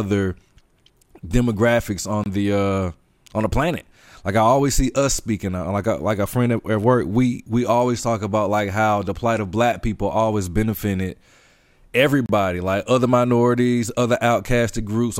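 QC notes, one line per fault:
2.24–2.26 s and 12.26–12.29 s, gap at a join of encoded pieces: the speech drops out for 23 ms, then 31 ms, with smeared edges, each resuming mid-flow on "the uh on the" and "like other minorities other". The gaps fall 10 s apart, where separately encoded sections were joined untrimmed, so each encoder's start-up silence and last-frame padding remain at the join.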